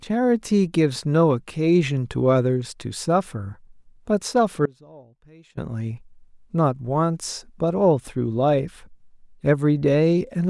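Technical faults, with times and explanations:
4.66–5.58 s, audio dropout to a faint residue: the speech cuts out abruptly for about 0.92 s, leaving only a faint leak about 25 dB down, likely a signal break while the path stayed live.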